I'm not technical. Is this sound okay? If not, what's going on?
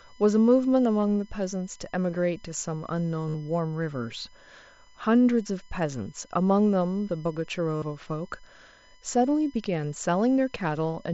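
No. A USB connection is leaking electrical noise from its steady data pulses into the audio, producing a USB whine: a thin, constant high-pitched tone running the whole way through, pitched at 1 kHz with its strongest part much higher, around 11 kHz.

Separately, there is concealed Bluetooth headset packet loss: short chunks of sound never arrived from the headset, and the phone filled the gaps by repeating the last bit it heard. There is a brief 15 ms gap at 1.02 s. The longer ones, from 3.29 to 3.34 s and 7.76 to 7.82 s, sound like a brief buzzy hum before the speech wobbles back in. The Bluetooth mSBC headset codec carrying the speech adds only a faint graininess.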